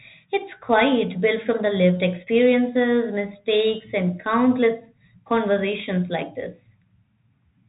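From start to finish the speech carries the sound of a Bluetooth CVSD headset codec. Nothing gets through above 3.8 kHz, so it's boxy and narrowband. The one-bit delta steps can't keep up with loud, bright moments, so s sounds turn scratchy over a grainy hiss, which fits a 64 kbps CVSD link.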